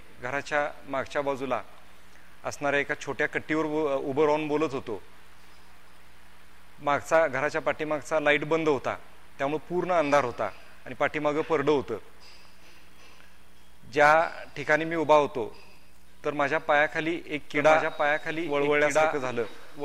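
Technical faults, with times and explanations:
17.41 s to the end, doubled audio track: a second full-band copy cuts in abruptly, trailing about a second and a half behind and a few dB quieter, likely from an extra capture path.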